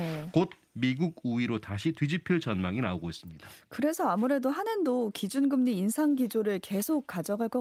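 No technical faults can be heard anywhere in the speech recording, so the signal arrives intact with nothing to place on the timeline.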